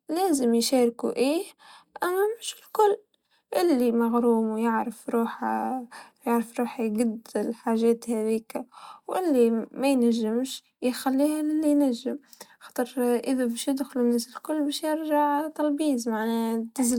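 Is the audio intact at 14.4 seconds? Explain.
Yes, at 14.4 seconds the audio is intact, with no audible fault at that moment.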